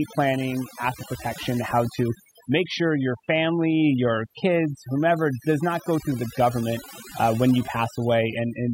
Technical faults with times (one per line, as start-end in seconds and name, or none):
0.00-8.73 overdone noise removal